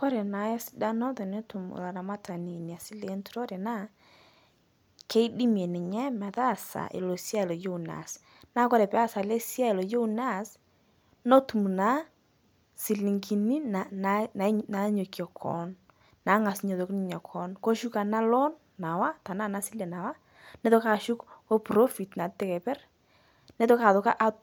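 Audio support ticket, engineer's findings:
No audible fault found in the speech clip. No symptom to trace to any component or mechanism.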